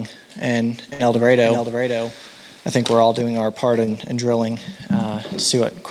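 At 0.93 s a burst of packet loss cuts out the sound until 1.01 s. The receiver had nothing to decode for that stretch, so it extended the last received sound for about 56 ms and faded it down. The result is a held, decaying fill in place of real audio. When playback resumes, roughly 60 ms of the original has been skipped, which produces a jump forward in the material.

From 1.15 s to 3.21 s a doubled audio track is audible. A second full-band copy of the sound trails the original by about half a second, sitting roughly 5 dB below it. The copy carries no reverberant tail or room colouring, and it switches in and out abruptly at both ends of that span. A likely cause is the same signal reaching the mix twice, once through a slower capture path.

At 3.85 s a short concealed packet loss occurs, lasting until 3.89 s. About 20 ms of audio failed to arrive in time. The decoder synthesised roughly 19 ms of continuation from the preceding sound and then crossfaded back into the incoming stream. 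The gap comes across as a brief smear or wobble rather than a silence.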